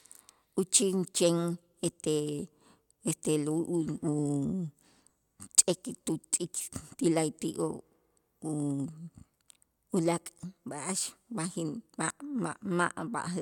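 Nothing in this speech recording sounds broken at any point; no dropouts, glitches or other technical trouble turn up anywhere along the way.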